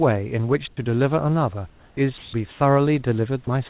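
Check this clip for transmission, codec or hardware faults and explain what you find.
The clip has three kinds of fault, all in pauses and edges of the speech. Throughout, nothing reaches above 4 kHz, which fits a narrowband telephone codec.

Comfort noise in place of the background appears at 0.68 to 0.77 s, 1.7 to 1.97 s and 2.51 to 2.6 s. The real background gives way to steady, featureless hiss. It drops by about 18 dB, 9 dB and 4 dB. The sender likely stopped transmitting in pauses, and the receiver synthesised noise.

The onset is clipped by the voice detector at 1.94 to 1.97 s. The first 30 ms of the returning speech are missing. The detector was likely slow to react, so comfort noise filled that gap. The speech then starts abruptly, without its soft beginning.

Sound is dropped by the voice detector at 2.18 to 2.33 s. About 70 ms of real speech is lost inside a 150 ms stretch of comfort noise. 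The detector likely mistook the speech for background and stopped sending. Steady noise replaces it until speech returns.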